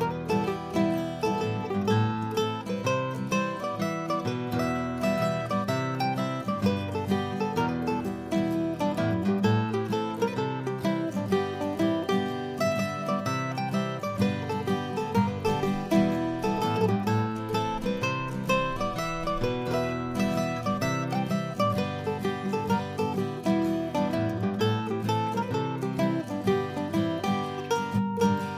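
Nothing here catches the ear as a fault at any point, so there's nothing to flag.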